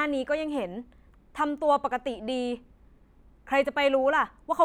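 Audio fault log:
No faults found anywhere in this speech recording.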